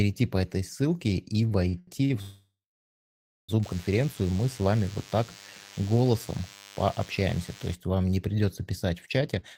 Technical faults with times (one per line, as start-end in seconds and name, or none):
1.49-2.12 repeated stalls (stutter)
2.22-3.50 call audio freeze
3.63-7.74 DECT cordless phone buzz
9.28-9.56 jitter buffer speed-up